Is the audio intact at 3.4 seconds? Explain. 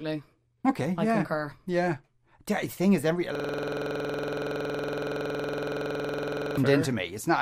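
No. A system hang loop runs from 3.35 to 6.57 s: the same 46.4 ms slice, which fits a 2048-sample buffer, repeats 69 times, giving a rattling 21.5 Hz stutter. The waveform shows one shape tiled identically, and the spectrogram shows matching vertical stripes.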